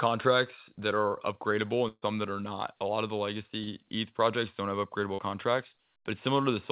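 It's a speech recording carried over a narrowband call path with nothing above 4 kHz, which fits G.711 A-law at 64 kbps. At 1.88–2.04 s there's a burst of packet loss. About 140 ms never arrives, so the receiver stretches the last sound into a fading tail that drops to silence before the speech jumps ahead. Then there are two short concealed packet losses, at 3.64–3.69 s and 5.15–5.20 s, each about 40 ms. These are patched over with synthesized continuation and come across as brief smears.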